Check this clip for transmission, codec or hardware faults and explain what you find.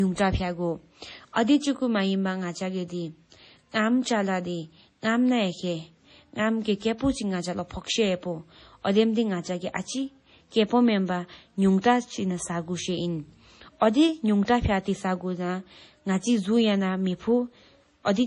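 The speech carries heavy MP3 compression damage for its whole length, plus two brief pre-echoes.

MP3 compression is likely the cause of the damage heard from start to finish. Nothing is present above 10.5 kHz, a fixed cut-off an encoder imposes when bits run short. The damage is heavy enough to suggest a low bitrate around 32 kbps. Weak frequency lines drop in and out between frames, giving a watery, swirling texture with metallic chirps on s sounds. A simple low-pass filter would dull the sound without this shifting, bubbling quality.

Pre-echo occurs at 11.81 s, spreading for 28 ms, and at 14.45 s, spreading for 27 ms. Each time a sharp attack lands late in a transform block, and the quantisation noise sized for the loud attack also fills the quiet moment before it. The result is a short hiss just ahead of the onset, which then sounds smeared. Unlike a click or dropout, the disturbance comes before the attack and is tied to it, not to random points in the clip.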